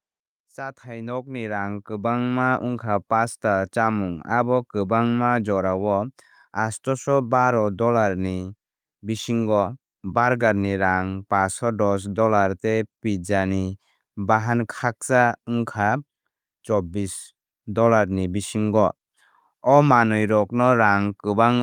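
From 0.34 s to 4.29 s the level climbs steadily by about 11 dB: automatic gain rising. The gain control judged the incoming speech too quiet and kept turning itself up over nearly four seconds, so the voice and the room noise beneath it swell together rather than the talker getting louder. On the waveform the envelope widens like a slow ramp; on a spectrogram every band, including the noise floor between phrases, brightens in step.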